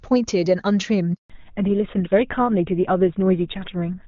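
At 1.14 s a handover gap cuts the speech for 160 ms until 1.30 s, as the call switches networks and no frames arrive. From 1.30 s the call falls back to narrowband: everything above 4 kHz disappears, leaving the speech duller and rougher, which fits a GSM full-rate codec replacing the clear wideband HD Voice coding heard earlier.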